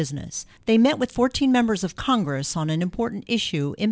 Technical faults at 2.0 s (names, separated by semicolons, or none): aliasing